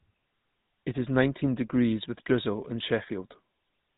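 From start to finish, the speech carries GSM full-rate codec damage. The vocal tract is modelled and driven by sparse, regularly spaced pulses. That gives a buzzy, gravelly roughness that is plainly audible. Nothing reaches above 3.8 kHz. This fits a 13 kbps GSM full-rate encoding.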